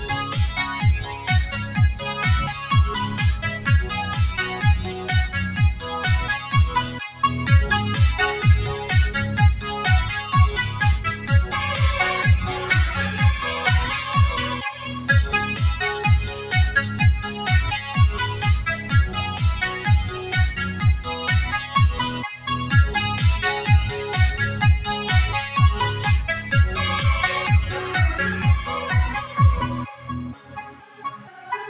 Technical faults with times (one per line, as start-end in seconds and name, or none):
0.00-31.69 noise suppressor applied to music or sounds
1.00-1.28 sound cut by the noise suppressor
6.87-7.23 sound cut by the noise suppressor
14.56-15.09 sound cut by the noise suppressor
26.37-26.52 sound cut by the noise suppressor
29.20-29.37 sound cut by the noise suppressor
29.85-31.48 sound cut by the noise suppressor